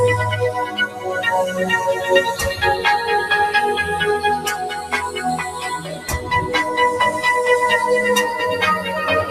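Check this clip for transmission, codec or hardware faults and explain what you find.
The clip has one processing fault, a noise suppressor applied to music or sounds, and it causes three audible level dips.

Throughout the clip, a suppressor built for speech stays active. It treats steady tones, ambience and reverb as noise and pulls them down. Its gain swings by around 10 dB. Onsets pass mostly intact, while sustained parts and decaying tails sink. The result is a pumping, fluttering, thinned-out texture across the whole clip.

Sound is cut by the noise suppressor at 0.66 to 1.09 s, at 4.75 to 4.93 s, and at 5.49 to 6.28 s. The deepest drops are about 10 dB, about 9 dB and about 8 dB. The suppressor misjudges these passages as noise and attenuates them harder than their surroundings. Held or fading material loses level or has its decay clipped short, while sharp attacks mostly survive. 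The first and third dips last a few hundred milliseconds each. The second is briefer.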